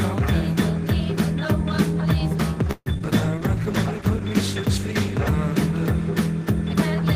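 Packets on the call were most likely held up in transit at 2.71 s, leaving the jitter buffer empty, which is a call audio freeze. From 2.71 to 2.88 s the receiver stretches the last sound into a fading buzz or hiss for about 146 ms, ending in roughly 40 ms of silence. When the stream resumes it picks up where it stopped, so nothing is lost, but a 146 ms gap is inserted and the audio runs that much later afterward.

Two short concealed packet losses follow, at 2.94 to 2.96 s and 2.98 to 3.02 s. In each, 20 ms of audio never reached the decoder in time. The receiver patched each hole by extending the preceding sound and then blended back into the real signal, so each is heard as a quick smear or wobble. With the first loss the playout also catches up slightly, trimming a small part of the earlier delay.

The call's bandwidth estimate then fell, and from 3.19 to 5.93 s the encoder was pushed from 32 kbps down to 14 kbps, staying at the lowest rate for about 1.9 s. 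This is a call bitrate drop. At that rate Opus codes far more coarsely and gives up high-frequency detail, so the audio turns rough, watery or muffled until the bitrate recovers near 5.93 s.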